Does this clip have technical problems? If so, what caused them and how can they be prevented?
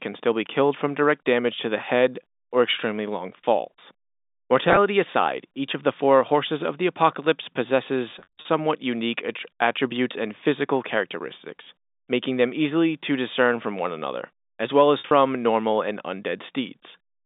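Yes. Packet loss with pitch repetition occurs at 4.69–4.77 s before "aside each of the", 8.11–8.45 s, 11.65 s before "making them easily to", and 14.99–15.11 s between "another as well as" and "normal and". The receiver filled the missing stretches by repeating the last pitch cycle, which is heard as a brief buzzy hold rather than a clean silent dropout. The largest loss, about 200 ms scattered over 340 ms at 8.11 s with runs up to 60 ms, fades toward silence. Larger jitter buffers and forward error correction on the telephone link would prevent it.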